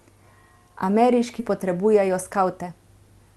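At 1.39 s a skip ahead drops roughly 0.7 s of speech. The waveform splices straight across with no silent gap, and the spectrogram shows an abrupt discontinuity in the formant tracks. From 1.49 to 2.70 s, a jitter buffer speed-up trims repeated pitch-period slices, around 70 ms in all. Speech runs at 105% with unchanged pitch. On the spectrogram the harmonics stay level while syllables compress slightly in time.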